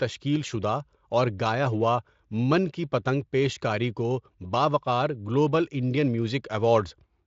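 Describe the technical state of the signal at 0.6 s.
At 0.6 s the audio is intact, with no fault present; the speech passes through the Speex codec path as normal, its content stopping short of about 7.6 kHz.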